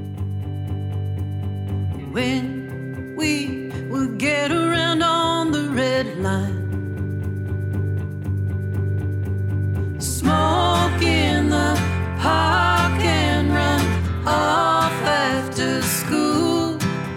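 No technical faults are audible anywhere in the recording.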